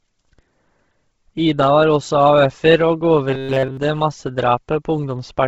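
It's a speech clip, and the whole thing has a smeared, grainy top end. The consonants and breaths come through as a hissy, noise-filled wash rather than real detail. That's the signature of heavy Bluetooth LC3 compression, likely at a low rate. The codec throws away most of the upper spectrum and papers over it with noise, and the damage fits something around 16 kbps with 10 ms frames. Then from 3.30 to 3.77 s there's robotic sound from repeated short buffers: most of that stretch turns into a rigid, metallic buzz at 134 Hz that only loosely tracks the speech. What's likely happening is that fresh audio isn't arriving in time, so the playback side keeps looping the last short chunk and drops the real signal. A 134 Hz buzz points to a chunk of roughly 7.5 ms being repeated.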